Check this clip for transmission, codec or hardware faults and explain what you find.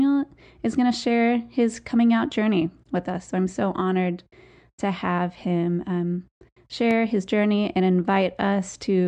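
One fault stands out in this speech: a loud pop from 6.91 to 6.93 s, just before "his journey and". A single sharp click sits on top of the speech, which continues underneath. Its likely cause is a sudden voltage step or pulse, from a plug, switch, static discharge or driver glitch, that entered the signal and was shaped by the downstream circuitry. On a waveform it appears as a narrow spike peaking roughly 5 dB above the surrounding speech. On a spectrogram it is a thin vertical stripe spanning the full frequency range.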